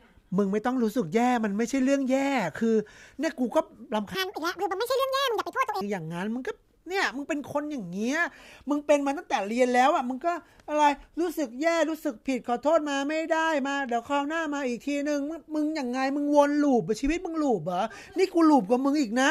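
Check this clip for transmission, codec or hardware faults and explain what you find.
One fault shows up, a section at the wrong speed. From 4.15 to 5.81 s the speech likely ran against a mismatched clock at 1.86 times normal speed, so it jumps roughly ten semitones higher and sounds hurried.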